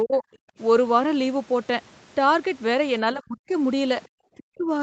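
Speech that dips sharply three times, at 0.04 to 0.24 s by roughly 20 dB, then at 3.14 to 3.53 s and 4.37 to 4.7 s by around 40 dB, nearly cutting out. This is likely speech suppressed in double talk, where an echo canceller mistook the talker for loudspeaker echo while both sides spoke and turned everything down. Separately, the room sound briefly drops out from 0.52 to 0.58 s, by about 25 dB. That is background gated by the echo canceller, which clamped the microphone while the far end played and released it moments later. The whole clip sits under a ceiling near 8 kHz, which fits a wideband Opus call path.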